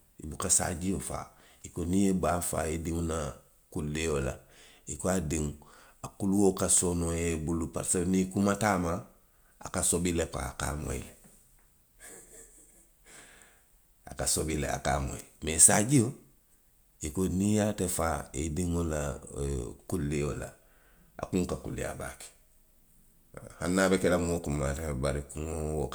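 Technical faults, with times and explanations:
No technical faults can be heard in this speech recording, and the signal holds steady with no interruptions or level disturbances.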